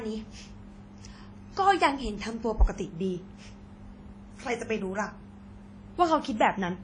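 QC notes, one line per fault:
Throughout, WMA compression: the speech rings and sounds washy, with a hiss that swells and fades with each syllable, and nothing is heard above 10.1 kHz. Likely a long-block transform codec smearing quantisation noise over tens of milliseconds, consistent with roughly 32 kbps.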